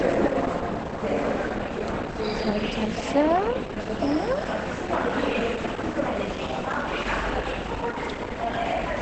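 Throughout the clip the audio is band-limited, with nothing above 8.6 kHz, and sounds plainly muffled and hoarse. This is likely Opus compression in its wideband SILK speech mode, which fits a low bitrate around 16 kbps, where the encoder discards upper bands and coarsely models the rest.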